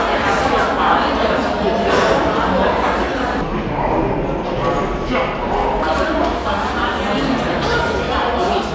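Everyday sound. From 3.41 to 5.83 s, a wrong sample rate slows playback to two-thirds speed. Pitch drops about seven semitones, which fits 24 kHz audio played at 16 kHz.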